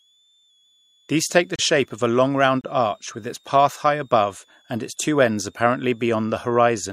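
A switching supply whistle runs under the speech for its whole length: a faint high tone wandering between about 3.2 and 3.8 kHz, very roughly 40 dB below the speech. A power converter cycling at an audible rate produces it. Unlike fixed mains hum or a test tone, its pitch drifts rather than holding steady.

At 1.56 to 1.59 s and again at 2.61 to 2.64 s, the sound stops abruptly for about 30 ms and 28 ms. These are gaps between stream segments. Time stamps on consecutive one-second segments fail to meet, and the player pads the gap with silence. Unlike a packet dropout, no audio is missing. Everything after each gap simply arrives slightly later.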